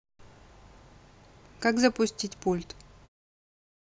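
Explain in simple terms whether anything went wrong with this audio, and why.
Nothing went wrong with this speech recording. Near the end the sound gently fades out, starting at about 3 seconds and finishing at 3.09 s. This is a deliberate, smooth fade of the kind an editor adds.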